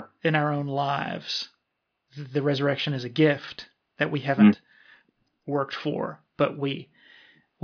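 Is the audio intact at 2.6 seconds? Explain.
Yes, at 2.6 seconds the speech plays through intact, with no dropout, click, distortion or other fault at that moment.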